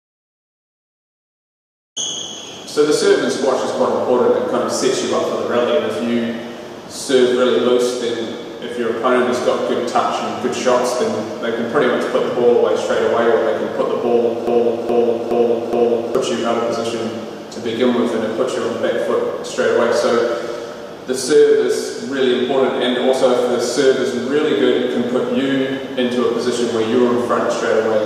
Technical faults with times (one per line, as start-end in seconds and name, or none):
14.47-16.15 broken-record loop